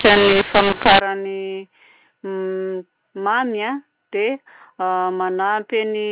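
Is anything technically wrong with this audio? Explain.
Yes. A mu-law and A-law mix-up affects 0 to 1.0 s. Speech coded with G.711 mu-law is decoded there as A-law, so each 8-bit code maps to the wrong level. The speech turns harsh and distorted, some levels too loud and others too soft, and near-silent moments fill with noise. From 1.0 s the mu-law telephone coding at 8 kHz decodes correctly, and nothing above 4 kHz comes through.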